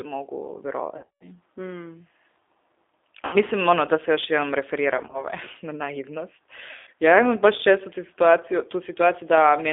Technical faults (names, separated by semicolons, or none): G.729 codec; VoIP packet loss concealed by the speech codec